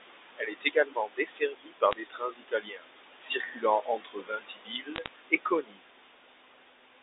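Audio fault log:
Throughout: noise suppressor artifacts. The room noise, sitting only about 8 dB under the speech, gets pushed down by about 19 dB in the gaps and swells back under each phrase.
0.37–2.85 s, 3.39–3.64 s, 3.83–5.83 s: speech cut by the noise suppressor. The suppressor mistook parts of the speech for noise and pulled them down with the background, by up to about 21, 12 and 22 dB. Roughly a second and a half goes in the first stretch and about a second in the last, so the affected parts sound swallowed or faint.
1.91–2.00 s, 4.96–5.08 s: bit errors on a digital phone line. Short bursts of sharp ticks and crackle ride on top of otherwise intact speech. Each flipped bit on the G.711 line corrupts a single sample, and the ones landing on sign or high-order bits jump out as clicks.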